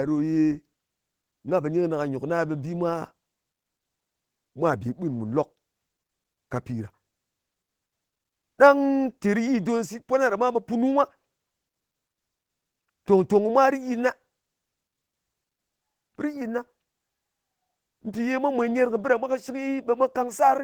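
Opus voice compression runs through the whole speech clip: hybrid mode at 16 kbps in 20 ms frames. SILK carries the band below 8 kHz while a sparse CELT layer covers the top, leaving plainly audible hoarse, slightly robotic speech. A spectrogram shows patchy, blocky upper energy stepping every 20 ms, ending near 20.2 kHz.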